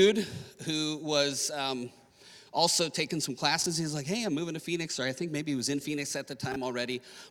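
Two short jumbled spots, at 3.62–3.66 s and 6.52–6.56 s, are chunks out of order. In each, a 20 ms chunk landed one slot late and played after its neighbour, so nothing's missing, but the swap leaves three hard joins.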